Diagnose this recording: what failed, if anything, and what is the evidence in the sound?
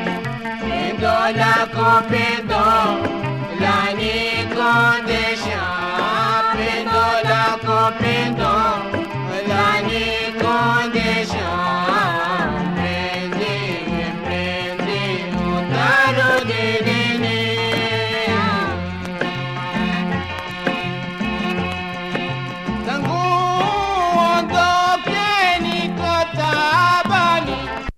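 A bit error spike, introduced on a digital link or in storage, appears three times, at 13.72, 17.77 and 20.51 s. Each is one sharp, broadband tick from a single corrupted sample, peaking at about -15, -9 and -15 dBFS, with no gap or smearing around it. A flipped bit jumps the value by a power of two and snaps straight back, unlike a dropout or buffer glitch.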